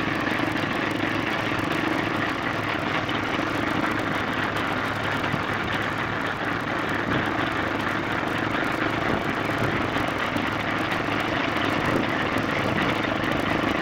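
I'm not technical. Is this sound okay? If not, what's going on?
No. From start to finish there is a low, steady buzz, about 38 times a second, and everything plays slightly slow, at roughly 89% of normal speed, though the pitch stays about where it should be. This is a block size mismatch (padded): one part of the system hands over audio in chunks, which fits chunks of 1024 samples, that are shorter than the next part expects. The leftover space is filled with silence, so tiny gaps repeat throughout, causing both the buzz and the slowdown.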